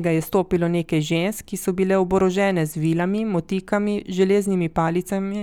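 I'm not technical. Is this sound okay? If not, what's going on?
Yes, it sounds fine.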